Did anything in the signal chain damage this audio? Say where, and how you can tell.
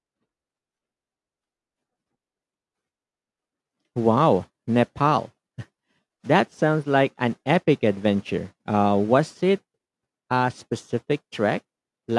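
No, nothing along the signal chain audibly damages this speech recording, and its level, continuity and timing hold steady throughout.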